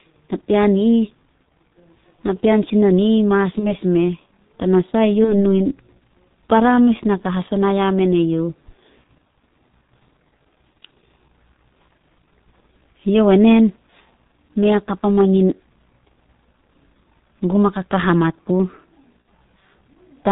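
Speech runs through the G.723.1 codec throughout: heavy, muffled, hoarse coding with nothing above 4 kHz and smeared consonants, which fits a rate near 6.3 kbit/s; unlike simple low-pass filtering, the voice itself sounds rough and slowly updated. VoIP packet loss concealed by the speech codec appears at 3.59–3.77 s, at 5.24–5.34 s just before "nu in", and at 19.22–19.25 s just after "gum a kakahamat puh". Each gap, consistent with one lost 30 ms frame, becomes a brief fading smear rather than a silent dropout or click.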